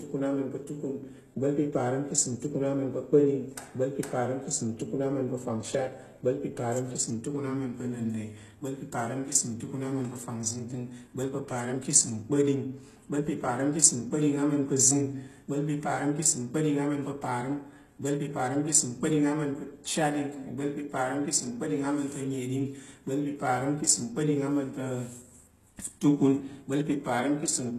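Speech throughout carries plainly audible HE-AAC compression damage, with s sounds turning gritty and lispy. A spectrogram would show a hard ceiling at 12.3 kHz and treble that repeats lower-band patterns. This likely comes from spectral band replication at a bitrate around 16 kbps.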